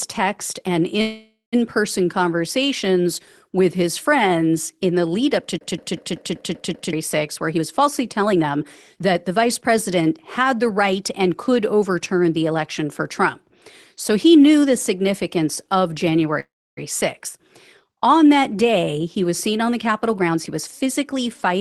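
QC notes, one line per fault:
1.01–1.55 s and 16.40–16.79 s, call audio freeze: after "text and" the sound stretches into a fading buzz for 0.51 s, about 0.16 s of it silent, then resumes at "person conversations with his". After "knew the significance of" a 0.37 s hold fades, with about 0.29 s silent. Nothing is lost; the speech is only delayed, likely because late packets let the jitter buffer run dry. A dropout would cut speech out instead.
5.58–6.93 s, CD stuck on one turn: the same 0.19 s slice plays 7 times in a row, with a brief mute at each jump back. The loop length and spacing stay perfectly even, like a laser thrown back at one scratch. A network stall would smear or fade the sound rather than repeat it cleanly.
7.47–11.91 s and 19.89–21.60 s, jitter buffer speed-up: speech runs about 11% fast, shedding roughly half a second, then about 13% fast after "was seen on the" to the end, shedding roughly 0.2 s. 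Short pitch-period pieces are trimmed repeatedly to drain an overfull buffer, so the speech sounds hurried but the pitch stays put. A resampling speed-up would raise the pitch instead.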